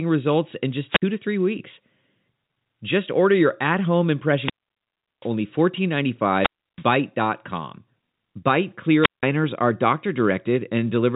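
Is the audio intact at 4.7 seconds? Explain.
No, 4.7 seconds falls inside a wireless microphone squelch dropout running from about 4.34 to 5.32 s, right after "order your at home". The radio link from the mic fades, the hiss creeps up, and the receiver's squelch slams the output shut for roughly 0.73 s, leaving a near-silent hole. Then the speech comes back, all still within the narrow telephone band.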